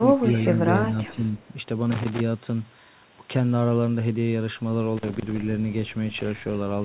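Speech clip with three kinds of fault. Echo leak at 0.27–0.48 s and again at 1.36–1.47 s: a faint delayed copy of the voice trails it by 374 ms, about 25 dB below the speech the first time and about 35 dB below the second. This is likely a far-end loudspeaker whose echo canceller let some of its microphone pickup slip back down the line. Speech suppressed in double talk at 0.53–0.59 s and 0.91–1.25 s: the voice briefly dips by a few decibels, a short scrap and then a longer stretch. The likely cause is an echo canceller that could not tell this talker from the loudspeaker echo while both sides spoke, so it turned everything down. Loose connector crackle at 1.92–2.20 s and 4.97–5.38 s: irregular bursts of scratchy crackle. A worn or dirty contact is making and breaking as it moves, chopping the signal. Throughout, the sound is band-limited with nothing above 4 kHz, which fits the narrowband call codec it passed through.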